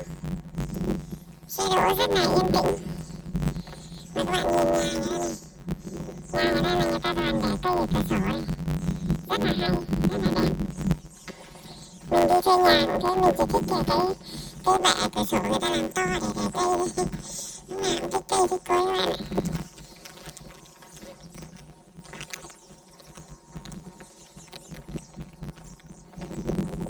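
From start to finish the audio suffers from planar audio read as interleaved: each 10.88 ms block stores one channel then the other, but is read as alternating pairs. The blocks are short, so the result is a robotic buzz at 91.9 Hz without an obvious octave shift.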